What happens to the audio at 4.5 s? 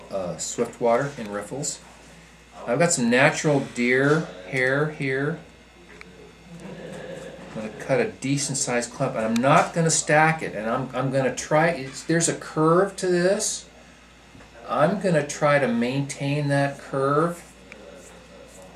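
Nothing goes wrong at 4.5 s; the audio plays through that moment intact, with no dropout, click or distortion.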